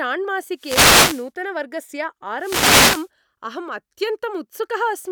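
At 0.57 s the speech is hit by a wireless microphone noise hit lasting until 1.29 s, and a second one follows from 2.39 s to 3.08 s, each about 0.7 s long. The FM radio link fades as reflected paths cancel the signal at the receiver, so receiver noise rises. Each hit is heard as a swish of static.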